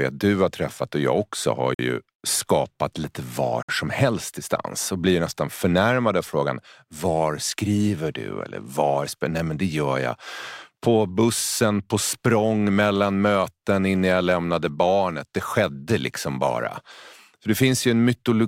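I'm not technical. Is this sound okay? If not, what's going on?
No. The speech cuts to silence twice, briefly, then carries on. This is a Bluetooth stall, likely from wireless interference emptying the headphones' buffer. It happens at 1.74 to 1.79 s, after "och jag också har", and at 3.63 to 3.69 s, after "ju skapat lite var".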